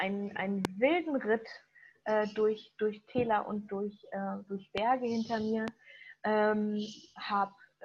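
A loud pop lands at 0.65–0.67 s, another at 4.78–4.80 s and a third at 5.68–5.70 s. Each is a single sharp thump roughly 20 dB above the surrounding sound, the last a little softer at around 15 dB, with the audio carrying on beneath. The likely cause is a brief voltage pulse from a plug, switch or static discharge. On a waveform each appears as a tall, narrow spike. On a spectrogram each is a thin vertical stripe spanning all frequencies.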